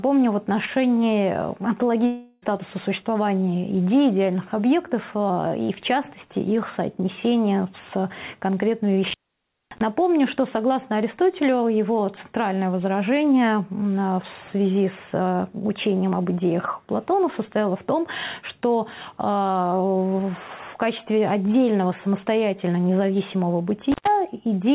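From 2.06 to 2.44 s the sound stops and the last moment is stretched into a fading buzz or hiss for about 0.36 s, never reaching silence; it resumes with roughly 0.36 s missing. This is a long network dropout, likely the receiver concealing lost packets. An intermittent contact follows at 9.04 to 9.81 s, where the line opens for about 0.57 s, and again at 23.92 to 24.08 s for about 0.11 s. Each opening cuts the signal with crackle at its edges and leaves faint hiss, all within a band ending at 4 kHz, which fits a G.711 call path.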